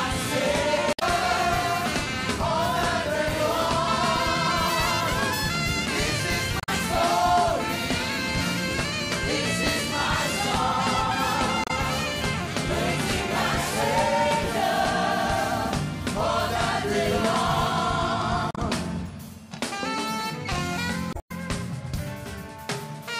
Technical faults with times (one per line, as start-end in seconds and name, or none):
0.90-1.02 damaged data in a compressed stream
6.60-6.69 damaged data in a compressed stream
11.64-11.71 damaged data in a compressed stream
18.51-18.58 damaged data in a compressed stream
21.10-21.31 damaged data in a compressed stream